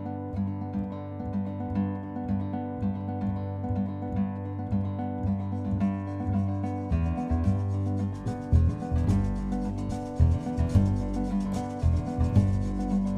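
No technical faults are audible anywhere in the audio.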